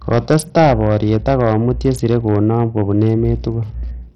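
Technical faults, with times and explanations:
throughout hard clipping: A gain stage ahead of the converter drives the speech about 8 dB past the level it can pass, so the loudest peaks are cut off flat, around 2 percent of the samples. Those squared-off tops add harmonics high up the spectrum, heard as crackle and a harsh edge on the stronger syllables while quieter passages escape.
throughout Bluetooth SBC compression: The top end stops at about 17.1 kHz, and heavy coding damage sits over the whole clip: treble that flickers in and out, plus a gritty, grainy noise with aliasing riding on the speech. That pattern points to a coder that splits the sound into a few wide bands and starves the weaker upper ones of bits. It is likely SBC at a low bitrate around 64 kbps, where the remaining bands are also coarsely quantised.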